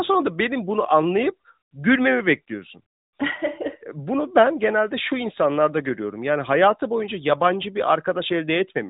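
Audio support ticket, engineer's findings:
No fault found: speech carried over an AMR narrowband mobile codec path, with nothing above 3.8 kHz, as that codec's band limit dictates.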